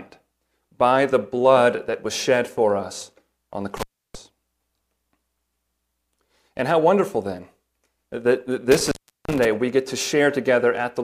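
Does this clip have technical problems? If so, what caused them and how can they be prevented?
Yes. Intermittent contact cuts the speech at 3.77–4.15 s and 8.72–9.45 s, dropping out for 0.32 s and 0.37 s. A loose connection opens, crackling at each edge. Secure or replace the cable and plugs before recording.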